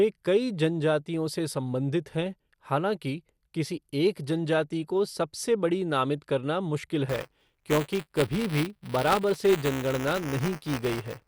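Throughout the speech, the sound is dull and has a gurgling, granular roughness. This is MP2 compression, likely at around 80 kbps. Starved of bits, the Layer II encoder switches off whole upper sub-bands and quantises the remaining ones coarsely, so the top end flickers in and out. That band-switching gurgle sets it apart from the smeared, swirly pre-echo of transform codecs like MP3 or AAC.

From 7.08 s, just after "बड़ी नामित करना मुश्किल", to the end, a steady robotic buzz at 200 Hz rides on the speech. This is buffer tearing. The write and read positions in the ring buffer have drifted until they cross within each period, so a small slice of every buffer, roughly a twentieth, replays audio from about 10 ms earlier, with hard joins on both sides. Because the buzz appears only where there is signal, it is distinct from mains hum or a ground loop, which would persist in silence.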